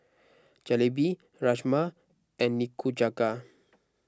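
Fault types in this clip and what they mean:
No fault types can be heard in this clip, so there is nothing to explain.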